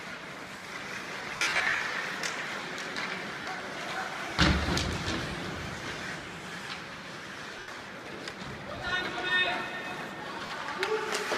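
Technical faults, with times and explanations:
1.36–1.80 s, 3.42–3.46 s, 7.59–7.68 s and 10.46–10.50 s: lost LE Audio frames. About 310 ms of gaps are scattered through the first span, the longest around 50 ms, and 40, 90 and 40 ms follow. The gap lengths fit 10 ms frames. The decoder repeats the last spectrum with randomised signs, so tones smear into noise.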